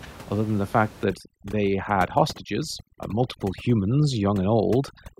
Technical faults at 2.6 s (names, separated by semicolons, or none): overdone noise removal